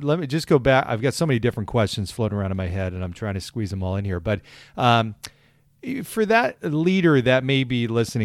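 No technical faults can be heard in this recording.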